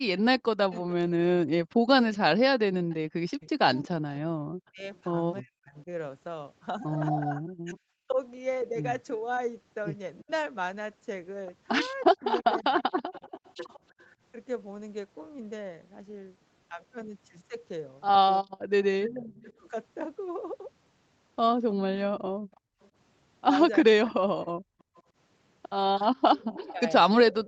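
A speech recording carries an echo leak: a faint delayed copy of the voice trailing by 317 ms, from 0.18 to 5.0 s, 10.21 to 14.05 s and 18.82 s to the end, rising from about 25 to 15 dB below the speech, likely from a loudspeaker echo canceller letting residue through. The talker's voice also dips in pieces, speech suppressed in double talk, between 0.2 and 13.81 s (roughly 3 s in total, down to about 40 dB) and between 18.42 and 27.34 s (roughly 1 s, down to about 35 dB), likely because the canceller turned down both the talker and the loudspeaker echo while they overlapped. From 22.34 to 22.79 s the room sound drops by about 26 dB, background gated by the echo canceller as it clamps the microphone.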